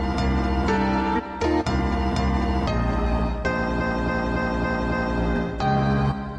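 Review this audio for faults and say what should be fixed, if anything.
Repeated frames from 3.77 to 5.16 s: a 0.28 s chunk, likely about six compressed frames, plays five extra times, stuttering and adding 1.39 s. Check the writer or muxer so each frame goes out once.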